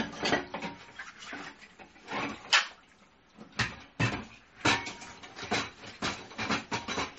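The whole way through, nothing gets above about 8.3 kHz, with watery, swirly smearing on attacks, most likely MP3 compression at a starved bitrate, something like 32 kbps.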